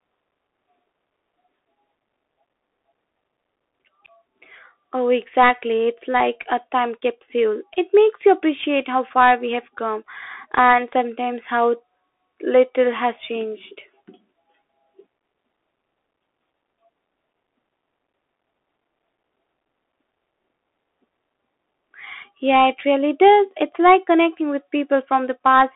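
Bluetooth CVSD headset codec damage runs throughout: the speech is squeezed into a 300 Hz to 3.5 kHz line band, with nothing above 3.8 kHz, consistent with 64 kbps CVSD. Its one-bit adaptive steps cannot follow fast loud rises, so s sounds turn scratchy over a granular hiss.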